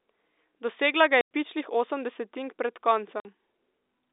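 At 1.21 s and again at 3.2 s, packet loss filled with silence cuts hard-edged holes of 100 ms and 50 ms, the first ending just before "pičlih osem desetink pred" and the second right after it.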